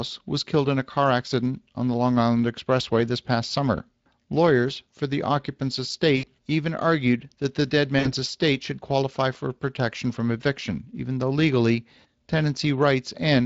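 Speech coded with the Speex codec throughout, audibly hoarse and noisy in a way that fits a setting near 20 kbps, unlike clean band-limiting, which loses treble without grit. VoIP packet loss concealed by the speech codec appears at 6.17 to 6.27 s, after "for the occupant's", and at 7.99 to 8.13 s, after "argued that the dead". Each time roughly 60 ms of sound is replaced by a fading extrapolation rather than the abrupt silence of a dropout.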